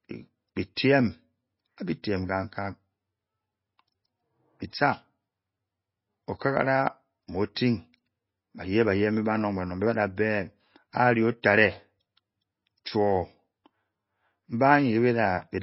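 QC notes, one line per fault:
Throughout: MP3 compression, likely at a low bitrate such as 24 kbps, since the speech has nothing above 5.6 kHz and sounds plainly watery and swirly. Starved of bits, the encoder drops the treble and flickers weak bands, which a spectrogram shows as a hard ceiling and patchy, blinking high-frequency cells.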